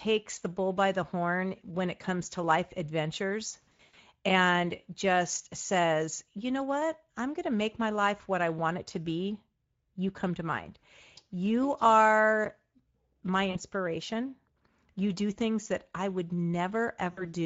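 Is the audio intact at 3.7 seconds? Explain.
No. From 3.66 to 4.00 s the audio shows VoIP packet loss concealed by the speech codec. About 220 ms of audio went missing in gaps scattered over roughly 320 ms, the longest lasting 100 ms. The decoder fills each gap by repeating its last pitch and filter at falling gain. Unlike a plain dropout, which would go silent, the sound smears out and fades, and stays weak for a moment after it recovers. Underneath, the Speex codec damage is plainly audible as a hoarse, noisy grain, consistent with a mid-rate setting around 17 kbps. It persists steadily rather than breaking up at one point.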